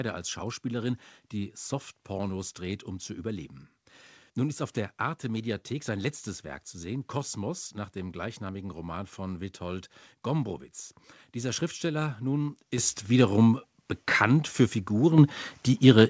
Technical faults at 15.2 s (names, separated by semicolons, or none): microphone volume stepped up